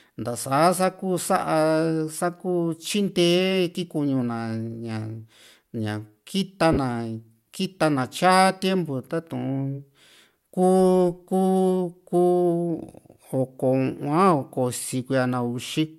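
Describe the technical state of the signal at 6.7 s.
At 6.73 to 6.78 s the speech is hit by lost LE Audio frames, a gap of about 40 ms that fits four 10 ms frames. The LC3 decoder fills the hole by replaying the last good spectrum with randomised phase signs, so voiced sound turns into a brief hissy smear instead of a click or silence. On a spectrogram the harmonic lines blur into a flat, noisy band for that span. The waveform loses its periodic shape. Light codec compression is present around it.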